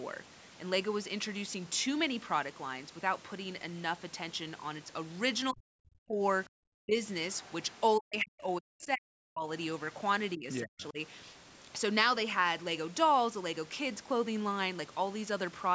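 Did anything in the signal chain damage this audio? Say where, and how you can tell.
Yes. Speech suppressed in double talk appears at 5.52–5.70, 5.92–6.22, 6.52–6.98, 7.98–9.49 and 10.36–10.98 s. The speech drops by as much as about 40 dB, in short bites at first and then for roughly a second and a half around 8–9.5 s. This is call processing: the echo canceller's suppressor likely mistook simultaneous talk for loudspeaker echo and ducked the near-end talker along with it.

The other side's voice leaks through from 7.32 to 7.80 s, a faint second voice sitting about 30 dB below the main speech, just before the longest suppression. At the same call-processing stage, the echo canceller has likely left part of the far-end loudspeaker signal in the microphone path. The residue is quiet in this half-second window, which, like the rest of the clip, stays within the call band up to 8 kHz.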